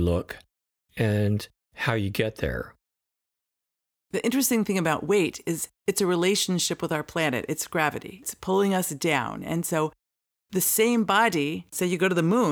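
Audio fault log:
No fault is heard in this speech clip.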